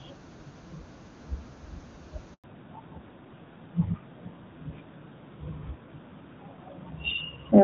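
A handover gap runs from 2.34 to 2.44 s: the speech cuts out for 100 ms while the call is passed from one network to another. No speech frames arrive during the switch, so the sound fades within a few tens of milliseconds and stays silent until the new link picks up. Whatever was spoken in that tenth of a second is gone for good, leaving a clean hole in the speech.

A fallback to narrowband follows at 2.44 s and lasts to the end of the clip. Before the handover the speech is crisp, and the absence of audible coding roughness fits HD Voice at its top wideband rate. After the switch the call lands on an older narrowband AMR codec, likely at its highest 12.2 kbit/s mode, and nothing above 4 kHz survives. Sibilants and breath lose their air, and the speech becomes duller and rougher for the rest of the clip.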